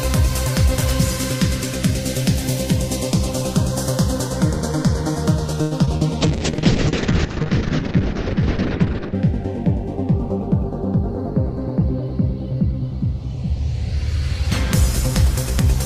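A short stall from a late packet comes at 5.61 to 5.73 s. A packet arrived late, the jitter buffer ran dry, and the receiver stretched the last sound for about 98 ms before resuming where it left off. Nothing is lost, but the sound hangs with a faint buzz or dip.

Short concealed packet loss follows at 5.85 to 5.89 s and 5.97 to 6.03 s. Packets never reached the decoder in time, about 20 ms and then 40 ms of audio, so the receiver extended the preceding sound to bridge each gap, heard as a brief smear or wobble.

A call bitrate drop runs from 6.21 to 9.21 s. The bandwidth estimate fell and the encoder dropped from 48 kbps to 6 kbps, holding the lowest rate for about 2.9 s. Coding turns coarse and the top end is cut from 20 kHz to 8 kHz, so the sound becomes muffled and watery.

A jitter buffer speed-up spans 11.37 to 13.35 s. With excess audio queued, the receiver trimmed small pitch-period slices repeatedly, roughly 70 ms in all, to reduce delay. 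Playback runs about 3% fast at unchanged pitch.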